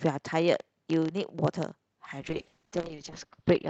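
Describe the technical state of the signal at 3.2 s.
At 3.2 s the call bitrate drop is in effect. From 2.22 s to the end, the speech sounds rough and muffled. That fits the Opus encoder falling from about 32 to 9 kbps, with the lowest rate held for about 1.03 s. The block size mismatch (padded) runs throughout. Short zero gaps in every block cause a 33.2 Hz buzz, and playback runs at 0.996 times normal speed.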